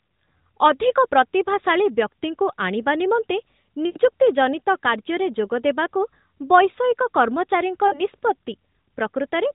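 Lost AMR speech frames occur at 3.86 to 3.98 s, right after "ଆଣିବା ନିମନ୍ତେ" and before "ଜନିତ କାର୍ଯ୍ୟରେ ଯୋଗଦେବାକୁ ବୈଷୟିକ", and again at 7.88 to 8.01 s. Corrupted frames were discarded, so the decoder repeated its last good pitch and vocal-tract settings at falling gain. The first gap, about 100 ms, smears into a drawn-out tone that fades toward silence. The second, about 40 ms, is a shorter drawn-out stretch, all within the lightly coloured narrowband AMR sound.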